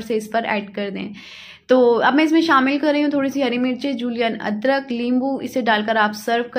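Nothing technically wrong turns up here; the audio runs without any faults to point to.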